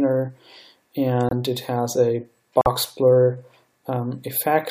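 Corrupt frame muted: damaged compressed frames were rejected by the decoder and replaced with silence, cutting abrupt holes into the audio at 1.29–1.33 s and 2.61–2.68 s, each fitting a few lost frames.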